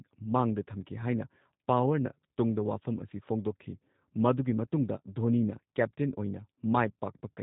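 All the way through, the speech has the roughness of G.729 coding, and it's plainly audible. The voice is rebuilt from a vocal-tract model and a few pulses per frame, which fits an 8 kbit/s budget, so it comes out slightly buzzy and synthetic, with nothing above about 3.8 kHz.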